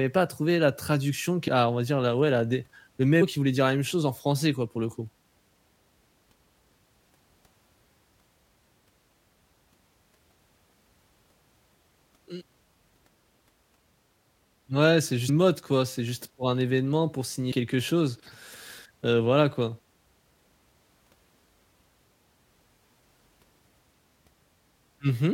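Compressed frames skipped at 1.47 s (between "trouver la traduction qui" and "ah on va dire"), 3.21, 7.02, 15.28 (before "mode quoi"), 17.51 (between "pour un événement pour" and "quelque chose") and 23.18 s. At each point the decoder drops whole frames, so the speech jumps ahead by roughly 150 to 400 ms.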